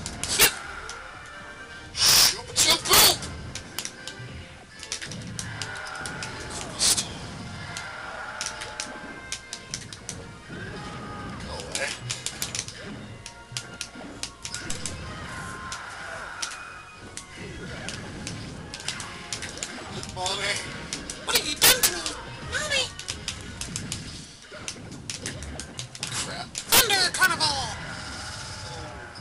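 Violent, sharp cracks break through the loud passages at 0.40–0.46 s, 2.06–3.11 s, 3.79 s, 6.88–6.92 s, 12.42 s, 21.36–21.87 s and 26.72–27.25 s, far harsher than ordinary clipping. This is integer overflow. Peaks pushed about 2 to 4 dB past the largest integer wrap around to the opposite sign instead of being limited. The 12.42 s event sits right at the limit, and each overshoot snaps across the full range.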